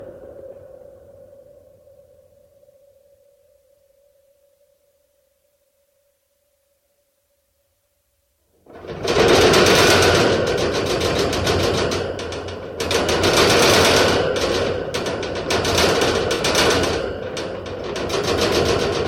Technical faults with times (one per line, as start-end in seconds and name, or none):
16.34-16.40 AAC frame loss with concealment